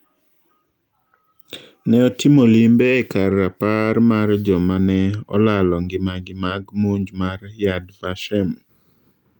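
No technical faults can be heard anywhere in the speech recording, and the signal stays continuous and stable throughout.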